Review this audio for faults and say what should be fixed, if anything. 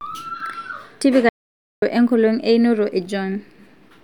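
Audio dropout to silence from 1.29 to 1.82 s: the speech cuts off mid-flow and about 0.53 s of silence follows, with no room tone, most likely because the input link or device briefly failed while recording continued. Secure cables and connections, and monitor input levels while recording.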